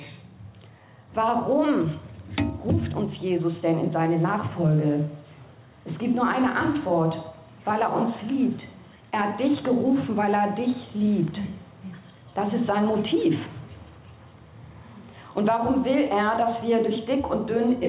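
Gain pumping runs through the whole clip: the gain swings by around 10 dB with each loud sound, leaving the dynamics squashed. The likely cause is input gain set far too high, with a fast limiter pulling it back. The band stops at 4 kHz, consistent with a narrowband telephone codec.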